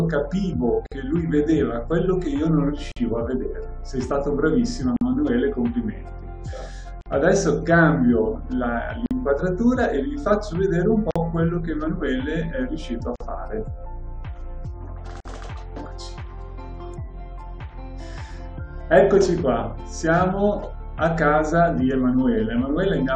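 The audio has a gap at a join of encoded pieces about every 2 s, at 0.86, 2.92, 4.96, 7.01, 9.06, 11.11, 13.16 and 15.20 s. Each is a silence of about 48 ms (the first is 53 ms) left by encoder start delay and final-frame padding that were never trimmed.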